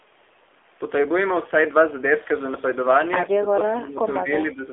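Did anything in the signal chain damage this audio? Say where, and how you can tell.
Yes. Codec stage: the whole clip has nothing above 3.5 kHz and sounds buzzy and synthetic. That fits the AMR narrowband mobile codec at a low rate near 7.4 kbps.

Call processing: the speech dips from 3.34 to 4.0 s, by up to about 15 dB. Smaller dips of about 5 dB follow at 4.23 to 4.30 s and 4.53 to 4.62 s. This is likely speech suppressed in double talk by an echo canceller.

Call processing: from 3.66 to 3.72 s, a faint copy of the sound returns 145 ms late, about 20 dB down. This is likely an echo leak past the far end's canceller.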